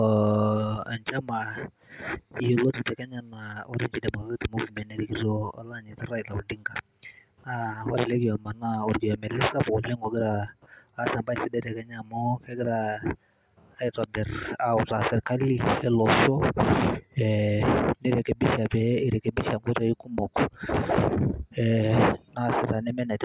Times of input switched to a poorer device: none

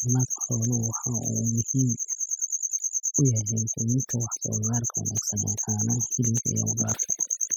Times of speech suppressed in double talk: none

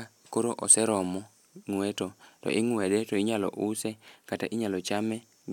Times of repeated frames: none

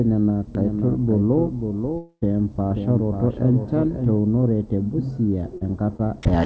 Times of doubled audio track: 0.55-4.19

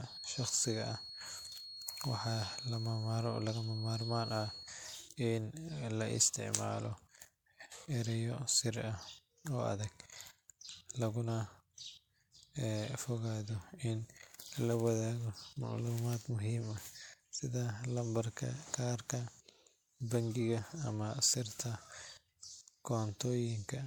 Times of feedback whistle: 0.00-4.77

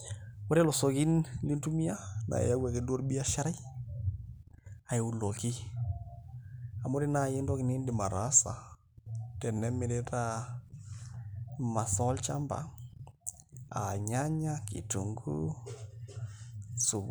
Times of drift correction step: 1.95-3.36, 7.88-10.13

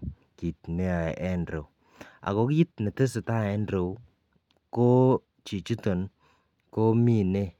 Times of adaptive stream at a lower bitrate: none

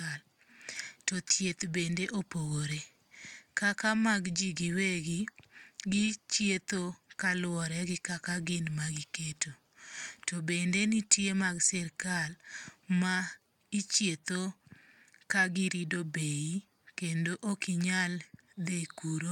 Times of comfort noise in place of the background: none

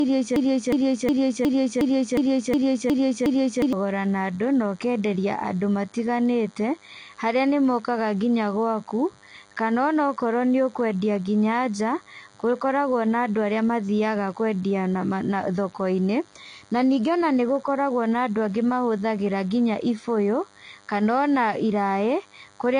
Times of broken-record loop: 0.00-3.73

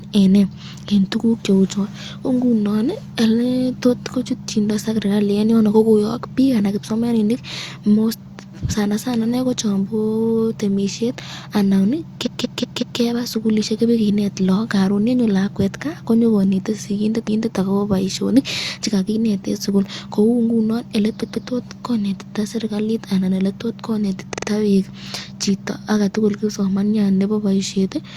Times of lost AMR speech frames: none

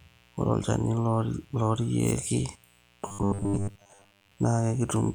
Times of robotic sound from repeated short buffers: 3.08-4.32

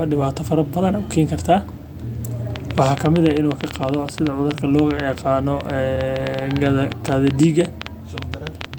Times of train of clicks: 2.56-8.78

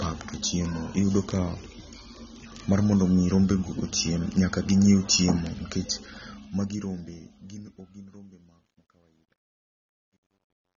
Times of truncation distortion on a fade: 5.92-10.76

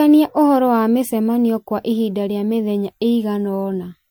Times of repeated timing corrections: none

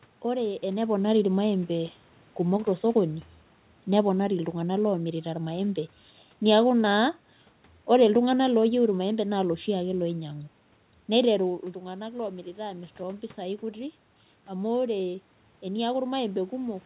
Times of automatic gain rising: 11.72-16.86

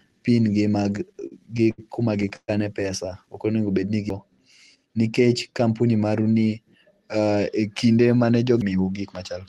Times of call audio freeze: 2.36-2.50

